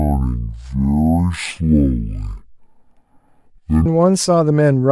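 From 0.0 to 3.86 s, the speech is stereo read as mono. The left and right samples were taken one after another as a single channel. So the audio runs at half speed and drops a full octave, 12 semitones. It sounds slow, deep and dragging.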